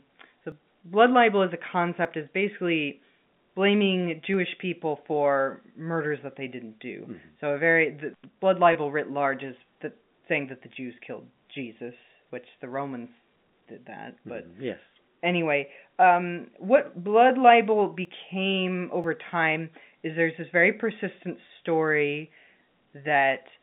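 At 0.52 s the speech jumps. About 30 ms of sound is gone, and the two sides butt together with no gap. This is likely a dropped buffer (overrun). The program fell behind and the hardware overwrote samples before they were read. The same skip returns at 2.05 s, between "blood libel as a" and "is basically blaming", and at 4.34 s. Each of those loses only about 10 ms. Two more follow later in the clip.

From 8.13 to 8.25 s, just after "a very the", an intermittent contact breaks the line. A loose connection opens for about 90 ms. The speech cuts out with crackle at both edges, and only faint hiss remains while the circuit is open.

At 8.73 s there is packet loss with pitch repetition. About 20 ms is missing, which fits a single lost packet. The receiver fills the gap by repeating the last pitch cycle. It sounds like a brief, slightly buzzy hold on the sound before the speech resumes.

The dropped buffer returns at 18.05 s, taking about 30 ms, and at 19.04 s, taking about 10 ms. 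Both are heard as the same forward jump.

At 21.47 s, after "there's this very persistent", a second 20 ms packet loss gives another short repeated-pitch buzz. All of this comes through a telephone band of roughly 150 Hz to 3.6 kHz.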